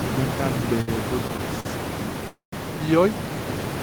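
Speech, with room noise sitting only about 7 dB under the talker, and three hold-ups in delivery. There are two short stalls from a late packet, at 0.81–0.89 s and 1.60–1.67 s. In each, the last bit of sound gets stretched, by 61 ms and then 46 ms, with a slight buzz or dip, before the speech picks up exactly where it left off. Nothing is lost, but each one pushes everything after it later. The bigger one is a call audio freeze from 2.27 to 2.54 s. The sound hangs for about a quarter of a second, fading as a buzz or hiss and then about 130 ms of silence, before carrying on from the same point. That's likely a longer burst of packets held up in transit that drained the jitter buffer completely. Again nothing is missing, but it adds roughly 250 ms of delay.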